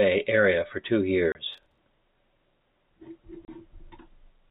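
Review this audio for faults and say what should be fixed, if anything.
Packet loss filled with silence cuts two holes into the speech: 1.32 to 1.35 s, just after "area for two", and 3.45 to 3.48 s. Each gap lasts 30 ms. That fits one lost packet. The receiver played silence instead, so both holes have hard edges.

Processor overload crackle follows from 1.53 to 1.78 s, also after "area for two". The processor missed roughly ten buffer deadlines in a row. Each miss replayed stale audio with hard edges. The result is a gritty tearing. Buffers near 10 ms would fit.

The G.711 telephone path limits the band to 4 kHz. That is expected for this format. Packet loss concealment should replace silent fill. Larger buffers or less processor load should stop the overload crackle.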